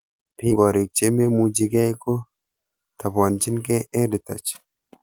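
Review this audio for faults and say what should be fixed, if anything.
At 0.51 s the speech jumps forward in a skip ahead. About 0.7 s of audio is gone, and the two sides are spliced together with no silence or filler between them. That absence of any gap is what separates it from a dropout or concealed packet loss, where a hole or a smeared fill would be heard. The audio was discarded while later packets were already queued, so the listener is suddenly ahead. Sizing the jitter buffer to absorb bursts, and letting it shrink gradually instead of discarding whole stretches, would prevent it.

From 1.09 to 1.46 s there is a jitter buffer speed-up. The speech runs at about 112% of normal rate while its pitch stays the same. That unchanged pitch is what distinguishes it from a sample-rate or clock mismatch, which would raise pitch along with tempo. The receiver was holding more audio than its target and trimmed short pitch-period slices repeatedly, removing roughly 50 ms in total, so the passage sounds hurried. 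Reducing delivery bursts upstream and spreading the catch-up over a longer stretch would prevent it.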